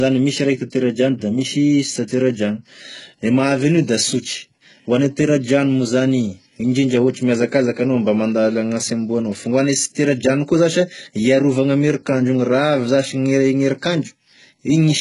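Throughout, the speech carries heavy codec damage, likely HE-AAC compression at a very low bitrate near 12 kbps. Nothing sounds above 11.1 kHz, and the treble is rebuilt from copied lower bands, so s sounds turn gritty, metallic or lispy.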